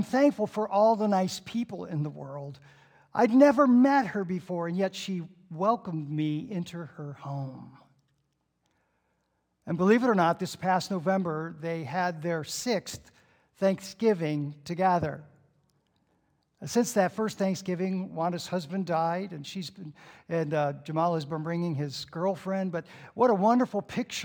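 From start to finish there is imaging from linear upsampling. The sound points to a rate raised from about 22 kHz to 48 kHz by joining samples with straight lines. That interpolation filters poorly. The top of the original band sounds dulled. A faint mirrored copy of the spectrum sits above it, between about 11 kHz and 22 kHz, roughly 35 dB below the signal. It adds a light metallic shimmer to bright, high content.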